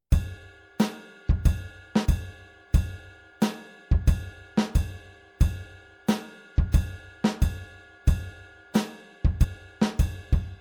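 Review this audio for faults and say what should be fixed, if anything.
Compressed frames skipped at 2.05 s and 9.43 s: the audio leaps forward by roughly 50 ms at the first point and about 100 ms at the second. The decoder drops whole damaged or missing frames, so a little of the sound never plays. The skip sizes fit a frame length near 23 ms, pointing to a couple of frames lost first and a few more later. A buffer underrun or dropout leaves a silent gap or a hard click instead. Preventing it means re-encoding from an intact source and verifying file integrity or checksums after transfer.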